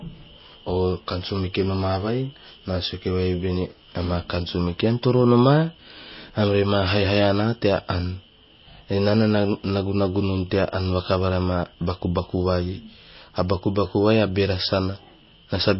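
From start to finish the speech has nothing above about 5.6 kHz, with a watery, swirly texture and smeared consonant attacks. That's most likely MP3 compression: starved of bits, the encoder cuts the treble and drops faint detail, which fits a bitrate around 24 kbps.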